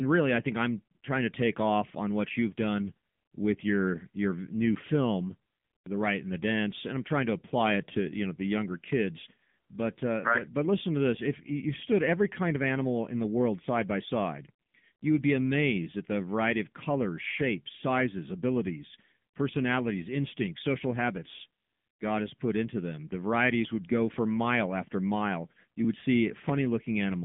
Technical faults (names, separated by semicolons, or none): AMR narrowband mobile codec